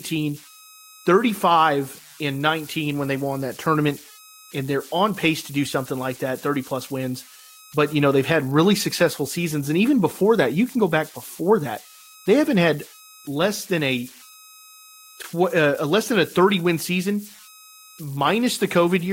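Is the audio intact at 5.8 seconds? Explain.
No, converter idle tones run through the whole clip: an undithered delta-sigma converter loops on small signals, leaving a whistle around 1.5 kHz, about 25 dB under the speech.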